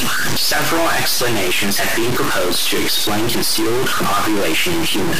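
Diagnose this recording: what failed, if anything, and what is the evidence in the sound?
Harsh, buzzy distortion runs throughout the speech, and the pauses fill with loud noise, which clipping wouldn't cause. This is likely a stuck bit at the converter, with errors of about -15 dBFS.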